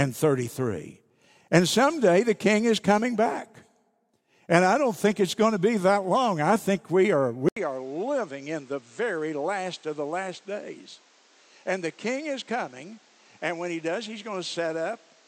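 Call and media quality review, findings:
Input likely switched to a poorer device at 7.49 s: 80 ms gap, then nothing above 8.5 kHz, level about 10 dB down, new background noise.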